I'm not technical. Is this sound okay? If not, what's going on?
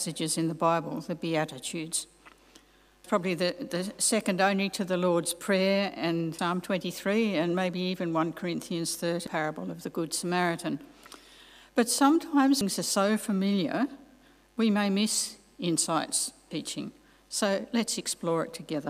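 No, not quite. There's damaged data in a compressed stream: brief chirps or blips at 3.04, 6.39, 9.27, 12.61 and 16.51 seconds. Bits of the file got scrambled, so the player briefly misreads the audio there and has to find its place again.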